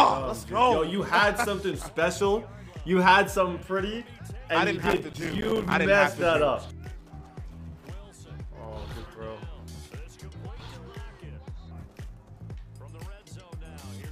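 From 4.86 to 5.74 s there is a burst of processor overload crackle. The system could not finish its short audio buffers on time, and dozens of deadlines were missed in quick succession. Each miss drops in a brief stretch of silence with hard edges, which fits buffers of around 5 ms. Together these gaps make a gritty tearing over the sound. On a waveform the stretch appears riddled with tiny flat gaps. A spectrogram shows a dense comb of thin vertical broadband lines that stops abruptly at 5.74 s.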